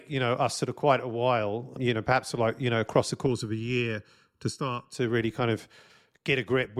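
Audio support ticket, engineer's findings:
Channel delay (comb filtering), 3.26 to 4.95 s, after "you know across the", before "really kind of". Hollow, phasey speech. One channel lags by under a millisecond before the mono sum; first notch around 700 Hz, repeating. Check stereo-to-mono path.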